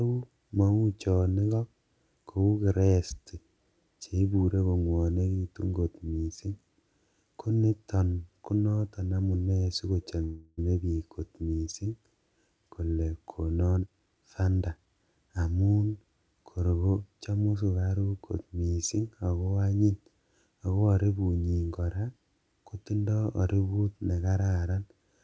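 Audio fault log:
10.24–10.59 s, call audio freeze: the last sound stretches into a fading buzz for about 0.34 s, likely a jitter buffer running dry; speech resumes intact, later.
13.71–14.87 s, jitter buffer speed-up: speech runs at about 129% speed with unchanged pitch as pitch-period slices, roughly 0.4 s total, are cut to shed delay.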